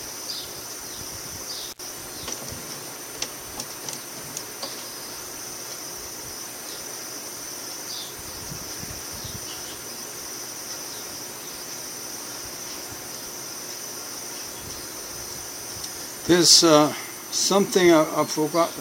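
At 1.72 s the sound cuts out abruptly. This is an intermittent contact fault. A loose cable or plug briefly lost its connection, and the signal path opened. The dropout lasts until 1.79 s, with the line open for about 67 ms. A short crackle marks each edge, as the contact breaks and then makes again. In the gap, faint hiss remains. Then the sound returns.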